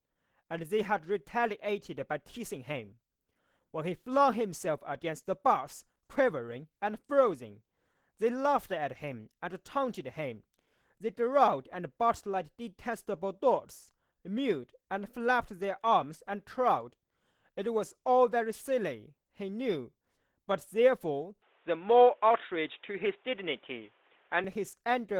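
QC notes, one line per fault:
Throughout: Opus compression, likely at a low rate in hybrid mode, which fits about 16 kbps. The speech still reaches about 20.2 kHz but sounds plainly grainy, rough and hoarse.
21.42–24.44 s: input switched to a poorer device, likely a headset or other microphone. With no gap, everything above 3.8 kHz vanishes, so the speech turns dull and boxy. The level shifts by around 5 dB, and a new noise floor sits some 45 dB down.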